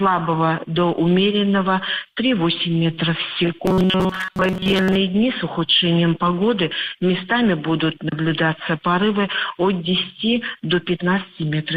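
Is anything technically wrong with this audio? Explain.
Yes. From 3.66 to 4.96 s the sound turns into a rigid metallic buzz at 188 Hz, likely robotic sound from repeated short buffers: a slice of about 5.3 ms repeats through most of that stretch. A spectrogram shows evenly spaced harmonic lines every 188 Hz, and the waveform shows identical repeating cycles.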